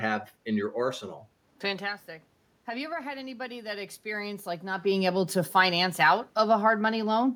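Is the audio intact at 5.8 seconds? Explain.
Yes, the speech is intact at 5.8 seconds, with no dropout, distortion or other system fault at that moment.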